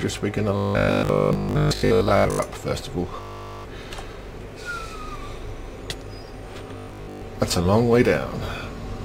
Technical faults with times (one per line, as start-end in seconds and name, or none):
0.57-2.39 robotic sound from repeated short buffers
3.17-3.67 robotic sound from repeated short buffers
6.78-7.22 robotic sound from repeated short buffers